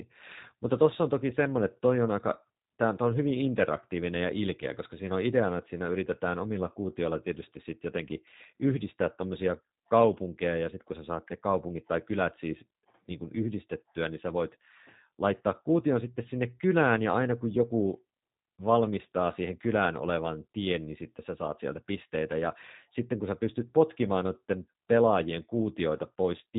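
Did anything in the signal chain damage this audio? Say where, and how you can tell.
Yes. Throughout the speech sounds rough, slightly synthetic and muffled, with nothing above 4 kHz. That is the G.729 codec at 8 kbit/s, a codec-stage fault: the voice is rebuilt from a vocal tract filter, a pitch predictor and a few pulses per frame, so plainly audible coarseness remains.

At 5.09 to 5.11 s, just after "interaktiivinen ja ilkeä koska" and before "on ideana että siinä", there is a brief smear. This is VoIP packet loss concealed by the speech codec, a network fault. The gap fits one lost 10 ms frame, which the decoder filled by extrapolating its last pitch and filter.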